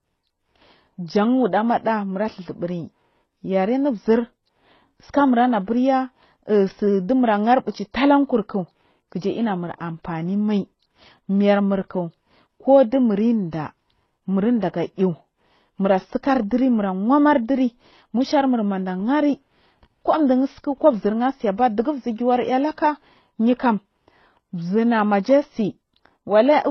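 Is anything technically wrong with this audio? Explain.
Yes. For the whole clip the speech sounds like it's been through transcoding between lossy codecs. Nothing comes through above about 6.2 kHz, so it's dull and boxy, and on top of that there's a mix of smeary, swirly artefacts that don't belong to one codec. It's likely a low-rate MP3 that was re-encoded to HE-AAC at an even lower rate. The second encoder wastes bits reproducing the first one's damage, adds its own, and the lower cut-off sticks.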